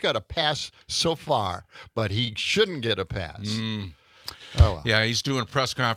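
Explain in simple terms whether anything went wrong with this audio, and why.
Nothing went wrong here: listening through, there's no glitch, dropout or other technical problem to point to anywhere in the audio.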